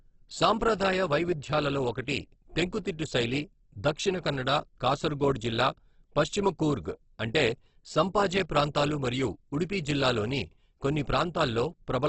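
All the way through, the speech sounds grainy, rough and noisy, with nothing above 8.2 kHz. That's likely Opus compression in its music (CELT) mode at a starved rate, somewhere around 12 kbps, filling bands with folded or noise energy.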